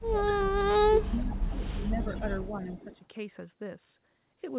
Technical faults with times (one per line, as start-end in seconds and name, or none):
0.08-0.70 speech suppressed in double talk
1.07-2.23 speech suppressed in double talk
1.99-2.96 echo leak
2.49-3.00 speech suppressed in double talk